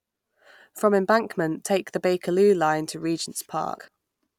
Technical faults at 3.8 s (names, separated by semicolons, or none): compressed frames skipped